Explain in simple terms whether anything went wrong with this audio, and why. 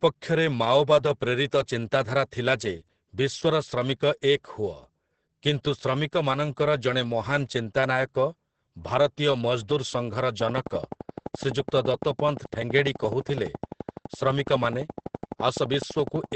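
Two things went wrong here. The first runs the whole way through: Opus voice compression squeezed the speech very hard, the way it's done for a low-data call. At that squeeze the codec keeps only the core of the voice with a rough copy of its fine detail, and cuts everything above about 8.5 kHz. So the speech sounds muffled and a bit hoarse, with a slightly robotic edge, like a poor internet call.

The second starts at 10.41 s and lasts until 16.33 s: a train of clicks. It's a steady ticking, about 12 clicks a second at a regular pace, roughly seventy in all, each sounding much the same and poking out clearly above the speech. It carries on through the pauses too, so it isn't coming from the talker. The likely cause is electrical interference from nearby gear or a faulty connection or power supply.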